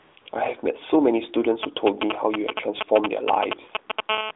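Three AMR comfort noise stretches open the clip, at 0.00 to 0.16 s, 0.20 to 0.26 s and 0.30 to 0.32 s. In each, the sending phone classed the input as silence and stopped transmitting speech frames, and the receiver filled the gap with synthetic noise rebuilt from a coarse level and spectral description. The result is a smooth, steady hiss that switches in and out in short patches, lasting 155 ms, 60 ms and 20 ms, in place of the real background.

From 1.63 s to 4.00 s, GSM signalling bursts from a nearby 2G handset intrude. The phone was exchanging short groups of radio bursts with the network rather than holding a call, and the audio circuitry rectified them into sound. This produces a galloping dit-dit-dit of brief 217 Hz buzzes, roughly as loud as the speech itself, sitting over the narrowband, 300 Hz to 3.7 kHz line sound.

At 4.09 to 4.31 s, the interference changes to a continuous GSM phone buzz, consistent with the handset moving into call mode and transmitting on every frame. 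Its 217 bursts per second are rectified into a hard, raspy 217 Hz tone rich in harmonics, about 3 dB below the speech level and unrelated to the speech content, holding steady for just over 0.2 s.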